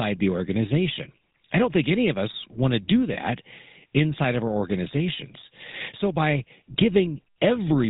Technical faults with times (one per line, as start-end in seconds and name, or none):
0.00-7.89 GSM full-rate codec
3.14-3.17 lost GSM frames